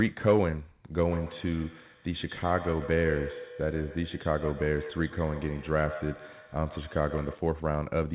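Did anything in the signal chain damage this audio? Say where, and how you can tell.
Yes. Call processing let a feedback echo between two devices through, from 0.98 to 7.57 s. The sound repeats roughly every 150 ms, at its loudest about 11 dB below the speech. Each echo canceller removes only its own device's playback, so the other device's output re-enters the microphone.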